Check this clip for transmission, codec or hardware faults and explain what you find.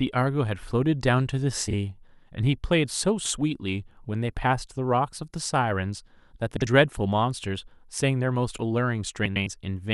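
The clip has one kind of transmission fault, heard three times in the speech. Frames out of order occur at 1.68 to 1.73 s, 6.57 to 6.67 s and 9.25 to 9.47 s: two adjacent blocks of frames were decoded in swapped order. The blocks are about 26, 52 and 105 ms long, consistent with swaps of one, two and four frames. Each stretch plays with its halves exchanged, giving a garbled flutter, and no time is lost.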